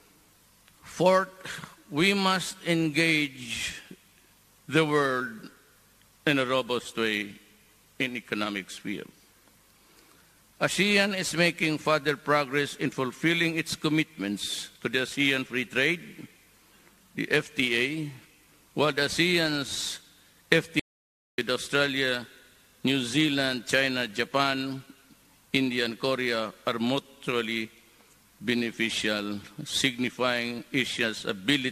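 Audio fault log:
20.80 to 21.38 s, audio dropout to silence: the sound cuts off mid-flow and comes back about 0.59 s later, and the gap in between is dead silent with no room tone at all, so whatever was going on there is simply gone. That total emptiness points to the input being lost while the recording kept writing silence, likely from a device dropping out, a link failing or a mute getting hit.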